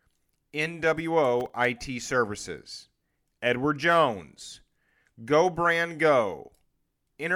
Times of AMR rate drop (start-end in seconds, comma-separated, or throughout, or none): none